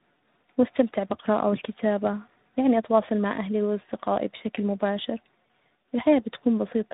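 Throughout the clip the speech shows tandem speech coding: it sounds coded twice in a row, which fits an AMR-NB leg followed by G.726. Each stage compounds the last's errors, giving rough, warbly, muffled speech with nothing above 3.8 kHz.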